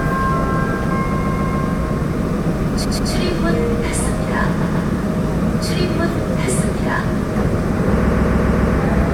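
Repeated frames at 1.19–1.60 s, 2.84–3.11 s, 4.60–4.88 s and 8.06–8.76 s: a 139 ms block of compressed frames plays again two to five times, stuttering and lengthening the sound.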